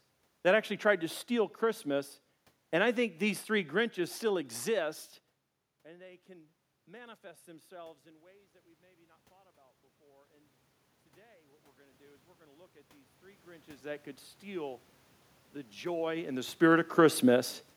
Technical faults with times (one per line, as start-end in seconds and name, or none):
5.83-8.56 automatic gain rising
11.76-14.88 automatic gain rising
15.79-17.18 zipper noise